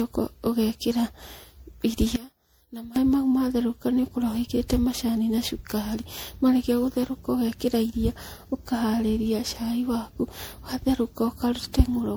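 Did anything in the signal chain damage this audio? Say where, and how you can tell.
Yes. At the codec stage, the whole clip sounds swirly, smeared and hollow, with blurred attacks, worse than a single lossy pass would explain. That is generation loss, most likely from about seven MP3 re-encodes at around 96 kbit/s, each requantising on a shifted frame grid and compounding noise and spectral holes.

In the wiring or mixing stage, from 2.16 to 2.96 s the centred speech drops by about 18 dB. This points to one channel inverted: with reversed polarity, the content common to both channels cancels when they are summed to mono, leaving only their faint difference.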